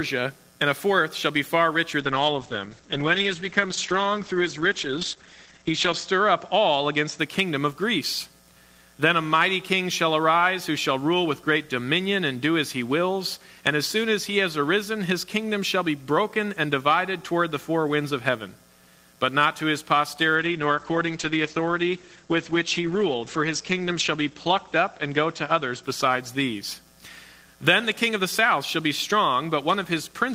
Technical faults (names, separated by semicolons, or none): call bitrate drop